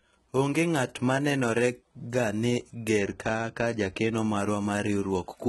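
All the way through, the speech has that gritty, metallic top end, and nothing comes through above about 11.8 kHz. It's most likely HE-AAC compression, with band replication faking the treble, and the heavy damage points to a low bitrate of around 16 kbps.

From 2.99 to 4.17 s there's a channel delay (comb filtering) issue. One side lags the other by a couple of samples, a tiny fraction of a millisecond, and when they're summed the top dulls, with the first notch up near 10 kHz.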